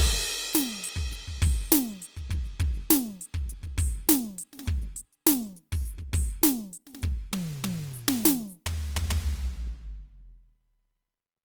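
Right through the music there's plainly audible Opus compression, likely around 24 kbps in CELT mode, so tones come out grainy and rough rather than swirly, with content reaching about 20.2 kHz.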